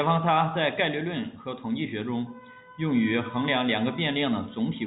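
Nothing faulty can be heard in this telephone-band speech.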